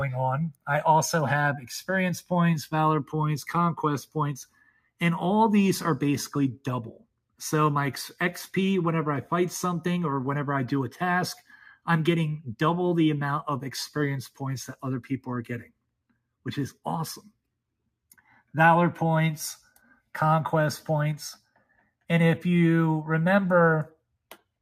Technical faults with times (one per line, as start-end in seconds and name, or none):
4.49-5.01 sound cut by the noise suppressor
6.99-7.40 sound cut by the noise suppressor
21.39-22.04 sound cut by the noise suppressor